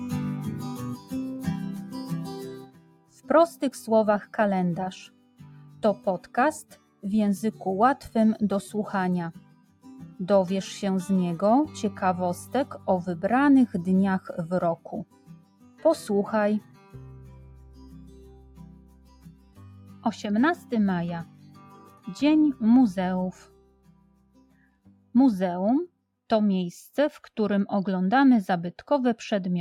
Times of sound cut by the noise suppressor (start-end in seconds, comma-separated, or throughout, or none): 0.00-3.28, 5.08-7.04, 9.37-10.20, 14.77-15.84, 16.61-20.71, 21.25-22.08, 23.32-25.14